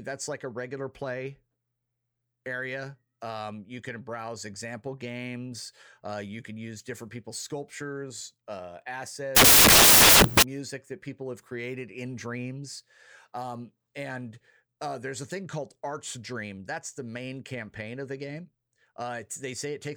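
From 9.36 to 10.43 s, samples built from the wrong bytes turn the speech into loud broadband noise, because low-order bytes were read as high-order ones. Unlike clipping, the signal is replaced outright rather than flattened at its peaks.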